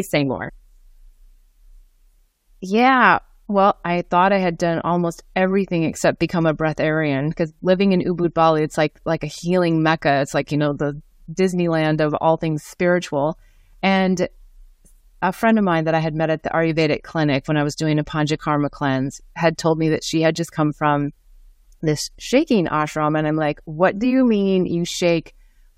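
At 0.48 to 0.50 s, compressed frames are skipped. Roughly three frames never reach playback, so the speech jumps ahead by about 70 ms. That fits a frame length of 23.2 ms.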